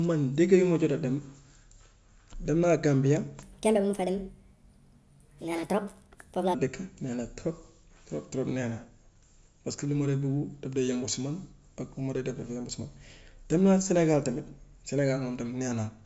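A speech clip with a wrong sample rate fault from 3.43 s to 6.55 s, starting just after "naa gambia". In that stretch the audio runs 1.38 times too fast and its pitch rises by 5.55 semitones, so the voice sounds high and hurried. Speed and pitch shift together by the same ratio, which fits samples recorded at 16 kHz being played back at 22 kHz without any rate conversion.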